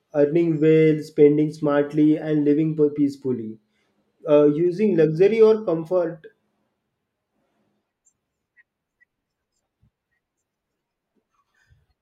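No technical faults detected.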